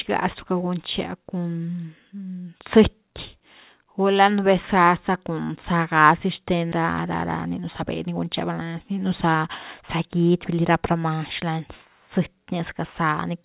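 At 6.72 s the speech skips ahead. About a second of audio is gone, and the two sides are joined with no gap. The receiver dropped this stretch while later audio was waiting, which cut the delay by roughly a second.

From 7.46 to 8.62 s comes a jitter buffer speed-up. The buffer still held more audio than it wanted. It trimmed short pitch-period pieces, about a tenth of a second in total. Speech runs at 107 percent, hurried but at unchanged pitch.

Across the clip, nothing sounds above 4 kHz. That band limit fits the G.711 A-law call path.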